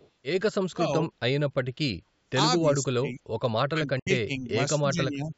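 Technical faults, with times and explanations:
0.0–0.1 s, echo leak: A very faint delayed copy of the speech sits under the opening, about 230 ms behind the original. It is likely loudspeaker sound the far-end echo canceller missed and sent back. It is quiet and brief.
0.61–0.92 s, 2.59–3.21 s, 3.69–4.55 s and 4.79–5.33 s, speech suppressed in double talk: The speech sinks sharply in each span. The deepest dips are around 30 to 35 dB, and the last one is milder. The likely cause is an echo canceller that heard both sides at once and turned the talker down with the echo.
3.99–4.08 s, Bluetooth dropout: The sound stops dead for about 70 ms, inside the third suppressed span, then returns as if it had kept playing. Audio packets likely failed to reach the headphones in time and were dropped.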